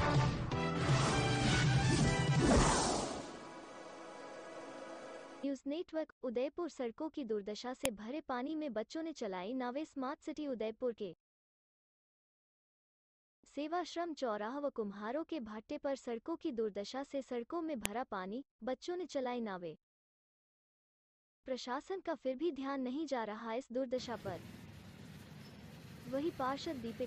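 Ten-second pieces of the stream were joined with their WAV headers left in place, so the file header played as audio. Those header bytes are heard as a sharp, loud click at 7.85 s and again at 17.86 s, cutting across whatever the sound is doing.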